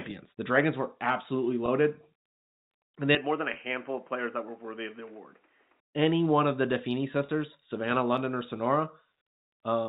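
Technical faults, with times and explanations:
1.66–1.68 s, 3.54–3.56 s, 7.26–7.28 s: packet loss with pitch repetition. The first comes just after "were absolutely". Each time one packet, about 20 ms, went missing. The receiver repeated the last pitch period, so each gap sounds like a brief held buzz.
3.15–5.80 s: input switched to a poorer device is the likely cause. Just after "and they", the sound turns dull, with nothing above 3.2 kHz. It drops about 5 dB, gains faint new background noise, and clears again at 5.80 s.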